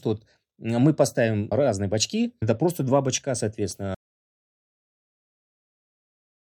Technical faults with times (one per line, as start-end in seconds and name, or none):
3.94-6.44 audio dropout to silence